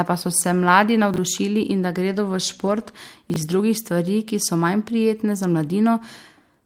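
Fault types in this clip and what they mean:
Chunks out of order: At 1.14–1.18 s, just after "pa so se mladi", and at 3.30–3.36 s, just before "iz drugih stvari ki", 20 ms pieces of audio play after material that should follow them. Nothing is missing, but the sequence jumbles briefly at the hard joins.
Lost packet rebuilt from error correction: At 1.17 s, 2.67–2.81 s and 5.65 s (just after "so manj prijetne za"), the decoder played low-bitrate backup copies in place of lost packets. The middle stretch has 80 ms rebuilt from four separate lost packets. There are no gaps, but these frames sound rougher and noisier.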